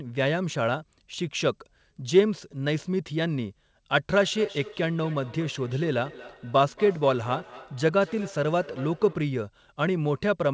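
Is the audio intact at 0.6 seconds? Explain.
Yes, the speech at 0.6 s is intact, with only the ordinary coding of the G.722 call path, which carries nothing above 8 kHz.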